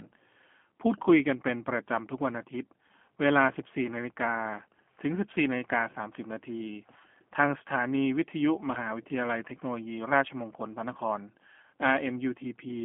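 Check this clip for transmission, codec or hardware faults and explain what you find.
One fault runs throughout: G.729 codec coding. It models speech with a vocal tract filter, pitch predictor and sparse pulses, fitting 8 kbit/s G.729A. It leaves plainly rough, synthetic speech with nothing above 3.8 kHz.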